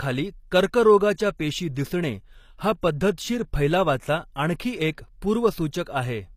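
Throughout the speech the sound carries the artefacts of an earlier encoding, and a spectrogram shows a hard ceiling with nothing above 14.9 kHz. This is low-bitrate audio saved at a high bitrate, likely a very low-rate encode re-saved as high-rate MP3, which cannot restore the removed detail.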